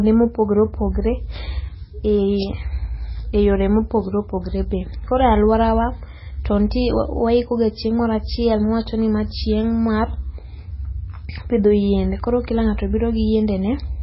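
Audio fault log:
throughout, MP3 compression: nothing remains above 5.6 kHz and the speech has a heavy watery, swirling texture, likely from an MP3 encoder starved of bits, which fits a rate near 16 kbps, chopping the treble at a fixed point and dropping weak frequency lines that flicker between frames.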